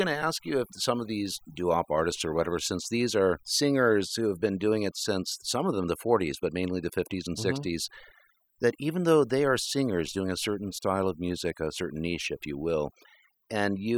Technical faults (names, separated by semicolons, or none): overdone noise removal